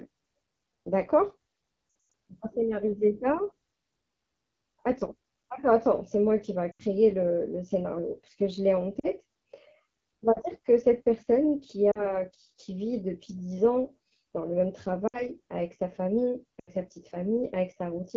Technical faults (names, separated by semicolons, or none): AMR wideband (HD Voice) codec; lost AMR speech frames